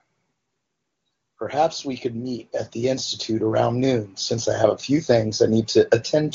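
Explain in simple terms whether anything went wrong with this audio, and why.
Nothing went wrong here: the speech passes through the AMR wideband (HD Voice) phone codec at one of its higher quality settings, where it stays clear, and there is no technical fault to point to.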